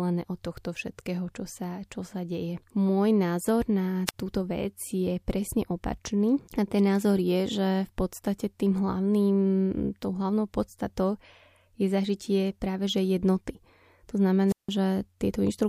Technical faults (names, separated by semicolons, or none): wireless microphone squelch dropout